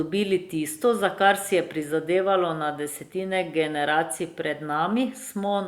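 No technical faults are audible at any point in the speech recording; nothing to report.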